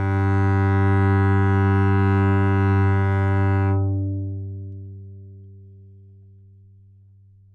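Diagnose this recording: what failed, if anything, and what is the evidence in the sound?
Nothing in the recording points to a failure at any stage of the chain. No audible defect stands out in these sounds that would call for a diagnosis.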